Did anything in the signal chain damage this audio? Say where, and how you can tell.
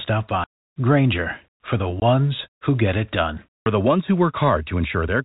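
Yes, it's the network stage: packet loss filled with silence. You get clean dead holes in the speech, from 0.44 to 0.6 s, a short one at 2.0 s, and again from 3.62 to 3.66 s, each with hard edges where the signal just stops and restarts. The gap lengths fit whole multiples of a 20 ms packet, so the receiver had nothing to play and dropped in silence instead of concealing. The G.711 telephone band, topping out at 4 kHz, is otherwise working normally.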